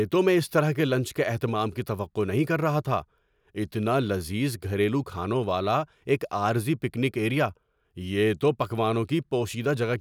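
Speech recording with no audible technical faults.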